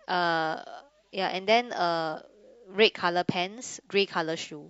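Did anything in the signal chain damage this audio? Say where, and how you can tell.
No, no damage is audible.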